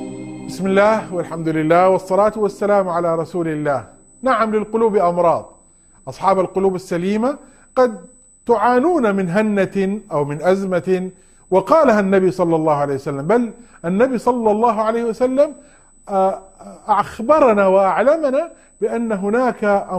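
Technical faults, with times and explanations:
Throughout, USB whine: a steady, fixed-pitch tone sits under the sound, fundamental at 8 kHz but strongest at its 16 kHz multiple, roughly 35 dB below the signal. The 8 kHz spacing matches the USB bus's 125-microsecond microframes. Each microframe pulls a burst of current, and that ripple gets into the audio path through shared power or ground. Because the frame timing never varies, the interference is a fixed-pitch high whine rather than noise.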